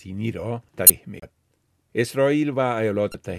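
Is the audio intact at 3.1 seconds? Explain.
No. From 3.11 to 3.14 s there is damaged data in the compressed stream. Bytes in that stretch are corrupted, so the decoder misreads those frames, loses sync and hunts for the next frame header. The result is a short chirp or blip in the sound.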